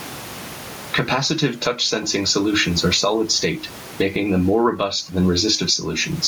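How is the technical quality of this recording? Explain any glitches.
The recording is marred by gain pumping that runs through the whole clip. The room noise itself sits about 30 dB below the speech. Across the full length, the gain swings by roughly 15 dB. The likely cause is the microphone gain set far too high, with a fast limiter or compressor clamping down on every peak and releasing in the gaps. The speech sounds squashed, with loud and soft passages pressed close together. Unlike a noise gate, which cuts the background off in the pauses, this is a level swing driven by the loud sounds.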